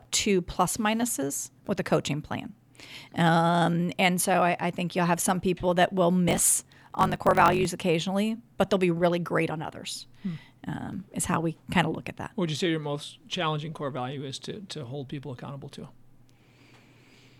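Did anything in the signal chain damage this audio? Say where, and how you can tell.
Yes: a buffer-stage block size mismatch (truncated), 6.26–7.67 s, gives a 46.9 Hz buzz and runs 1.12 times faster with its timbre kept, unlike a sample-rate error. This fits 1024-sample reads.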